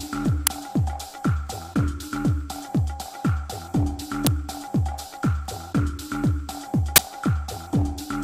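The audio carries three short bursts of harsh digital noise, at 0.47 s, 4.27 s and 6.96 s. The first two last about 5 ms each. The third lasts about 20 ms. Each is an uninitialised buffer fault. A block of output was sent to playback before any audio had been written into it. Whatever stale data sat in that memory was read out as samples. The result is a sudden, loud, noisy blip.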